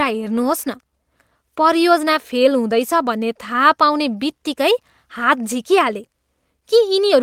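Nothing stands out anywhere in this recording; there's no fault to point to at any moment along the way.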